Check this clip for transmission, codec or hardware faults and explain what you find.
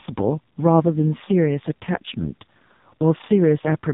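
One fault runs throughout: AMR narrowband mobile codec compression. The speech was squeezed through a vocal-tract model at a very low bitrate, which fits the 5.15 kbps mode, leaving heavily buzzy, synthetic speech with nothing above 3.8 kHz.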